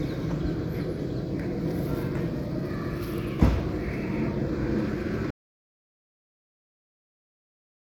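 An everyday sound recording with an audio dropout to silence. At 5.31 s the sound cuts off mid-flow. Silence follows to the end, with no room tone at all. The input was likely lost, and the recorder kept writing silence.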